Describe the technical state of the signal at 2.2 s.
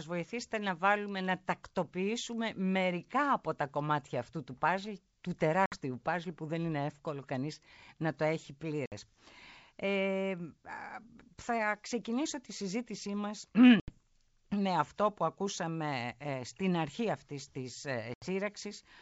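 At 2.2 s the speech signal is intact, with no fault present and the 64 kbit/s G.722 wideband coding carrying the sound up to about 7 kHz.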